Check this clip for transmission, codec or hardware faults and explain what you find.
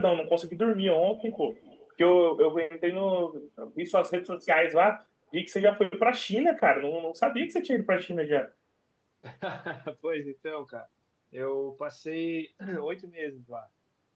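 Two faults come through on the speech, both tied to echo control on one side of a call that carries the sound through a WebRTC path, with audio band-limited at 8 kHz.

Echo leak appears from 1.17 to 1.38 s and again from 1.55 to 1.93 s. A faint repeat of the speech trails it by 217 ms, about 20 dB down in the first stretch and about 30 dB down in the second. The likely cause is a loudspeaker on one side whose echo canceller let part of its microphone pickup return down the line. On a spectrogram, weak copies of the harmonic bands appear shifted right by about 0.2 s.

Speech suppressed in double talk occurs between 2.41 and 2.85 s. The level sinks in pieces, about 30 dB at its deepest, across roughly a third of a second in total. This is likely the canceller failing to tell the talker from echo while both sides spoke, and attenuating everything. The waveform envelope shows abrupt notches, and the spectrogram shows the upper bands thinning or vanishing in patches.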